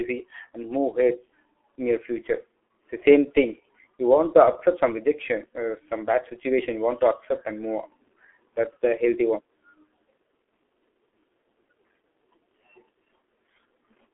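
Speech throughout carries heavy G.723.1 codec damage, muffled, hoarse and smeared, which fits roughly 6.3 kbit/s; a spectrogram shows energy confined to 300 Hz–3.4 kHz, nothing above 3.8 kHz.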